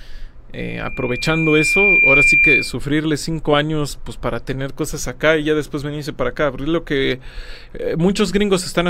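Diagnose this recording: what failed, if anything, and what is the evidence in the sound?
Loudspeaker feedback squeal in the playback-to-microphone loop: a 2.4 kHz tone swells from 0.59 s to about 10 dB over the sound, ending at 2.76 s. Steady interference wouldn't build like that.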